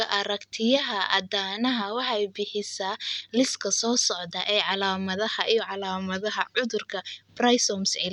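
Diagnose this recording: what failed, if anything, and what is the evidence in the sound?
Nothing appears to have failed anywhere in the chain. The speech carries no audible defect that would point to a problem at capture, conversion, transmission, storage or playback.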